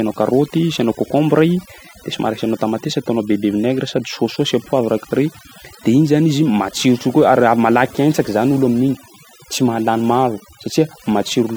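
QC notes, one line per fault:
throughout, overdone noise removal: the pauses between phrases drop to near silence dotted with twinkling specks. A noise reduction stage was pushed too hard on a noisy recording, so each frequency band that came near its noise estimate was pulled far down or switched off. Quieter parts of the voice fell below that line and were stripped out with the noise, and the scraps of noise that survived flicker on and off as those specks.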